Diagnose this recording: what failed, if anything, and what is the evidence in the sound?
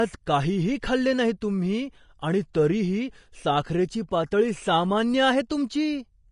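Grainy, hissy treble with nothing above 10.5 kHz throughout, likely Vorbis compression at the codec stage, coarse residue quantisation fitting a bitrate near 34 kbps.

At 1.41 s, between "काहीही खाल्ले नाही" and "तुम्ही आणि तरीही साखरेची", a 10 ms hiss smears an attack: pre-echo, the block's quantisation noise spilling before the onset.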